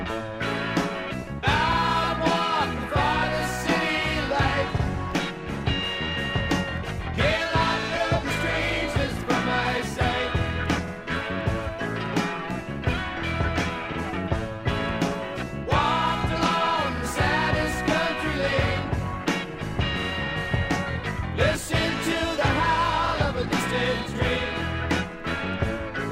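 Overlapping chunks: each 3-second block begins 50 ms before the previous one ends, so a 50 ms slice replays as a brief stutter at 1.73, 4.78, 7.83, 10.88, 13.93, 16.98, 20.03 and 23.08 s.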